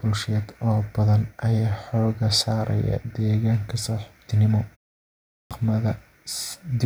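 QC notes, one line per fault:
5.33–5.51 s, clipped start after a pause: speech bursts in abruptly with its first 177 ms missing, because the output device slept through the 0.65 s silence and woke late.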